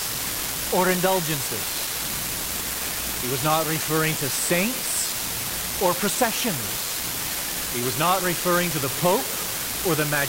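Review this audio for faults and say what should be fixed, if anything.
There's an unreliable data bit running through the whole thing, from start to finish. One line in the converter or digital interface is marginal, so that bit flips in a random share of samples, and every flip adds a spike of the same size, about -16 dBFS. You hear it as a constant fizzy crackle under the speech, and it keeps going in the pauses, which is the giveaway. To prevent it, check and reseat or replace the cabling and converter hardware, and verify the link with a test signal before recording.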